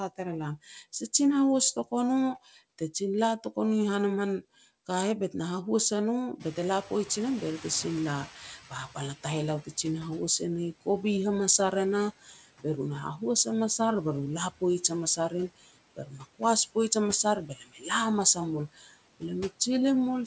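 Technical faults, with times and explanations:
Throughout: noise suppressor artifacts. The residual background, cut by about 18 dB, dips between phrases and swells under speech.
6.39–9.65 s: noise suppressor catching up. The room noise jumps by about 22 dB near 6.5 s and first passes through with less reduction, then sinks over about 3.3 s as the estimate adapts.
12.24–12.42 s, 15.96–16.41 s, 17.46–17.85 s, 18.75–18.96 s: speech cut by the noise suppressor. The first comes after "ar e nah" and before "be ru na", the second after "hamas a rim", the third after "hamas ar". Speech itself drops by about 10 to 15 dB, sounding swallowed. Unlike the artifacts, this hits the speech rather than the background.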